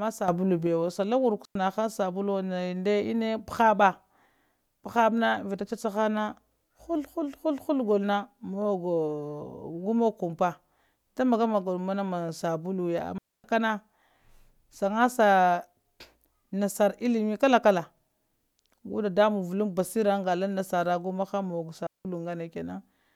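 Three digital wireless dropouts in this speech: 1.45 s (about 0.1 s, right before "sabuluwo nda"), 13.18 s (about 0.26 s) and 21.87 s (about 0.18 s). Each time the receiver lost too much data and muted fast, leaving a clean silent hole with no noise burst around it.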